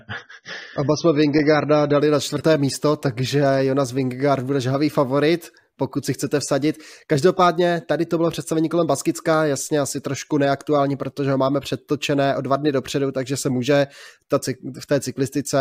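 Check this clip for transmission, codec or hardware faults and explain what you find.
One codec-related fault is present, at the start of the speech. From 0.0 to 2.0 s, just before "na čtvrté místo", this is an adaptive stream starting at a low bitrate. The player opens on a cheap rendition, consistent with AAC at about 24 kbit/s, so nothing above 6.3 kHz survives and the speech sounds dull and smeared. It then switches abruptly and without a gap to a fuller rendition, consistent with about 96 kbit/s.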